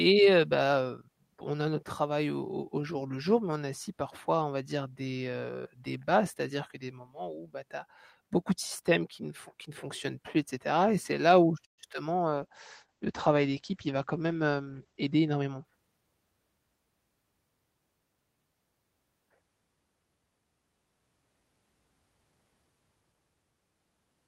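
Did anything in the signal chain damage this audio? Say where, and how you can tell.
Yes. At 11.65 s the speech stops for about 0.15 s, until 11.80 s: a brief fading tail, then near silence. Nothing is cut when it resumes, so time has been added rather than lost. This is likely a call audio freeze at the network stage. Packets stalled in transit, the jitter buffer ran dry, and the receiver filled about 124 ms by extending the last sound before playback picked up where it left off.

From 12.30 s to 15.71 s the speech turns muffled and coarse, with its top end gone, and it stays at its worst for about 2.9 s. That is a call bitrate drop at the codec stage. The bandwidth estimate fell and the encoder went from 32 kbps to 12 kbps. At that rate it cut the coded bandwidth from 20 kHz to 8 kHz and quantised everything more roughly, until the rate recovered.

Inside that stretch, from 14.66 s to 15.58 s, the speech hurries along at about 114% of normal speed while its pitch stays put. 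This is a jitter buffer speed-up in call processing. The buffer had grown past its target, so the receiver trimmed short pitch-period slices over and over, removing roughly 150 ms in all to pull the delay back down.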